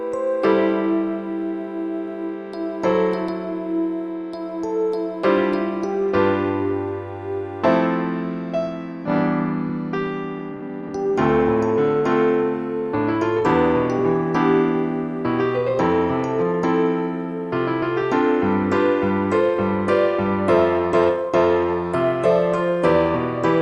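A skip ahead at 9.05 to 9.07 s drops about a second of audio without filling the gap, so the sound jumps straight forward, probably because the jitter buffer overflowed and discarded audio while later packets were already queued. Jitter buffer speed-up follows from 9.69 to 13.99 s at 109% and from 15.58 to 18.02 s at 105%. Repeatedly cutting pitch-period-sized pieces removes roughly 0.4 s and 0.15 s, so the audio sounds hurried at unchanged pitch. The call path's content stops near 12 kHz, which fits Opus at 32 kbps.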